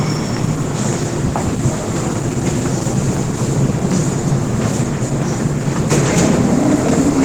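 From start to finish the everyday sounds carry plainly audible Opus compression damage, likely from a low-rate encode that fits about 16 kbps. The coder keeps energy in every band and fills starved ones with noise, and here it seems to have fallen back on its speech-oriented hybrid mode. The result is hoarse, grainy and rough, yet still full-band. Unlike MP3 damage there are only a few swirling, watery holes in the spectrum.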